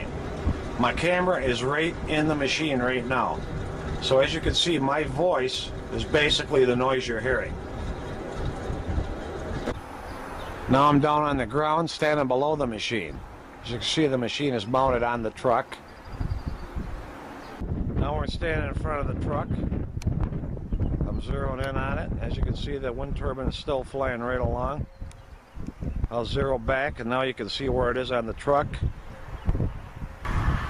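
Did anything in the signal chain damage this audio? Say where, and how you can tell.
No, nothing in the signal chain damaged this audio. None of the stages, from the analogue side through conversion, processing, transmission and storage to playback, left any audible trace.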